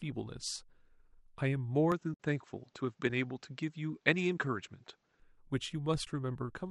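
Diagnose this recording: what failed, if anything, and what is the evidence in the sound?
At the capture stage, from 1.92 s to 5.20 s the band suddenly stops at 7.8 kHz, with no gap and no real level jump, and a fresh noise floor appears, roughly 45 dB down. This likely means the input switched to a poorer device. On a spectrogram, the top band is cut flat across that span.

In the codec and network path, AAC frame loss with muting leaves soft-edged holes at 2.14 to 2.17 s and 6.05 to 6.07 s. Zeroed frames fade out and back through overlapping windows, which fits several lost frames. On the waveform these show as tapered dropouts, and a spectrogram shows blank vertical gaps. The light low-delay AAC compression, likely AAC-ELD at 64 kbps, is also present.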